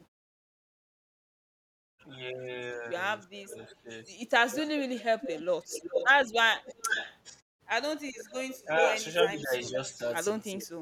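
From 2.15 to 2.42 s a very faint delayed copy of the speech trails about 0.39 s behind. From 3.36 to 10.01 s it returns far louder, only about 10 dB down, at roughly 0.40 s delay. This echo leak is likely a far-end echo canceller letting loudspeaker pickup through. Unlike reverberation, it is a distinct, fixed-delay repeat.

Overlapping it, between 3.42 and 5.06 s and again from 8.67 to 10.78 s, the main talker dips while the echo plays. The dips reach about 10 dB and about 15 dB, adding up to roughly half a second and under a second. This is speech suppressed in double talk, likely the canceller ducking both signals at once. It cuts into active speech, unlike the mute in the pauses, which leaves the speech intact.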